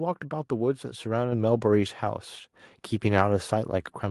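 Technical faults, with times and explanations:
1.32 s: microphone volume stepped up. The level of the speech and the background noise behind it rises together by about 5 dB in a single step and stays at the new level. That pattern points to the call software judging the microphone input too quiet and raising the device's input volume at once rather than ramping it. Because the gain change sits before any processing, the room sound and the speech shift by the same amount, so the jump is heard in both.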